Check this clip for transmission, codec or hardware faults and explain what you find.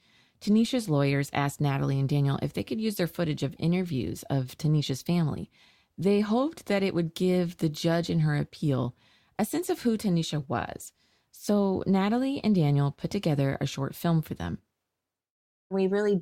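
Nothing in this speech clip points to a transmission, codec or hardware problem, so there's nothing here to flag.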